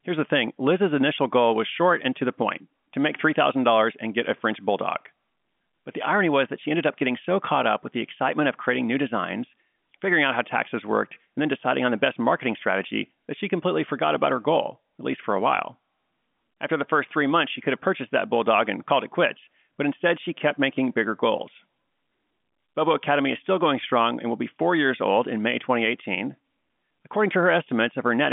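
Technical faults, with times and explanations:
No technical faults detected.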